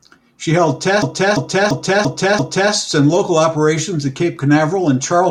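From 1.02 s to 2.73 s the speech gets stuck in a system hang loop. The same 341 ms slice plays five times over, about 2.93 repeats per second, so you get a slow stutter rather than a buzz. The system stalled while the audio hardware kept replaying its ring buffer, and that loop length fits a 16384-sample buffer. Hardly anything seems to go missing, since the speech resumes with "and local operations at".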